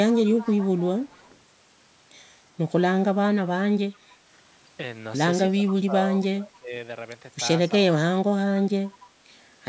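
From 0.09 to 1.37 s there's an echo leak: a faint copy of the speech trailing by 283 ms, roughly 20 dB under the main voice. It's likely a loudspeaker on one side whose echo canceller let some of its mic pickup back down the line. The same 283 ms ghost pops up again briefly, much quieter, at 6.22 to 6.27 s and 9.01 to 9.06 s.

Between 5.51 and 6.72 s the speech is suppressed in double talk. For roughly a second in total the voice dips, by around 15 dB at its deepest. That's likely the echo canceller hearing both sides at once and turning everything down.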